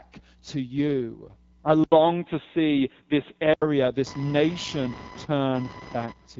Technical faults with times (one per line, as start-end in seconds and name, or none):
0.00-6.39 AMR wideband (HD Voice) codec
1.84-3.62 input switched to a poorer device
4.06-6.39 computer activity noise